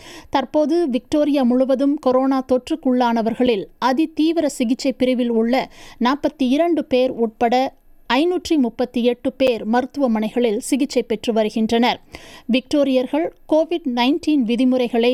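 At 3.46 s and 9.47 s there's a gap between chunks: the audio was delivered in 6-second chunks, and each join leaves about 7 ms of silence, heard as a tiny dropout.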